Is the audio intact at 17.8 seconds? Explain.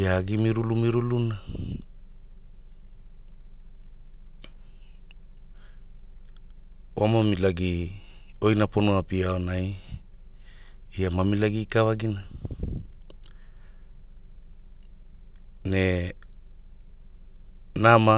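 Yes, the speech at 17.8 seconds is intact, carried through the call path with its narrowband sound and nothing above 4 kHz.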